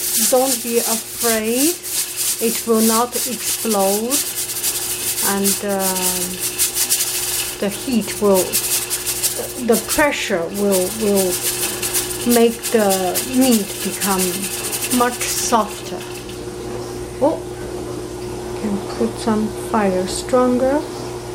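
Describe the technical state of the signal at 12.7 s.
Around 12.7 s the audio is intact, with no technical fault to be heard at that point.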